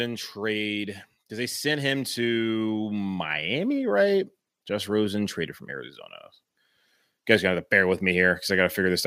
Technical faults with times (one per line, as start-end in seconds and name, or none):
0.36-5.41 automatic gain rising